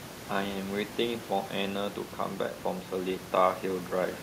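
Nothing goes wrong with the system in this speech recording, and the room noise sitting about 16 dB below the talking is just the space the microphone was in.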